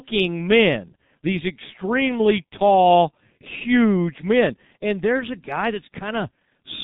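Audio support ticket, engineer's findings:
Speech muffled and hoarse throughout, nothing above 4 kHz, consonants smeared. G.723.1 codec, heavily degraded; slow 30 ms frame updates fit a roughly 6 kbit/s low-rate setting.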